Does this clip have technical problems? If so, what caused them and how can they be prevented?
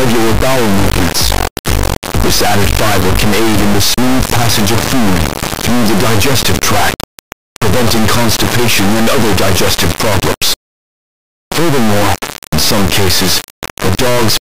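Yes. An integer-read-as-float fault runs through the whole clip. The samples were written as 32-bit integers but decoded as 32-bit floats. Those bit patterns become meaningless values. Some are almost zero and some are huge or invalid. The output therefore slams between silence and the clipping limit. It sounds like a harsh, very loud square-wave buzz that cuts out in the quietest passages. Prevention: declare the sample format explicitly and check it at every read and write.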